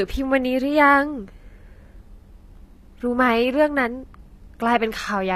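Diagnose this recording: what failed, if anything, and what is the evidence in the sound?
HE-AAC compression runs throughout the speech, with plainly audible codec damage. Nothing sounds above about 14.9 kHz, and the treble that remains has the synthetic, misaligned quality of spectral band replication, where lower bands are copied upward and shaped by a coarse envelope rather than coded directly. The failure sits at the codec stage, likely an HE-AAC encoder running at a low bitrate, which the degree of damage suggests is around 24 kbps.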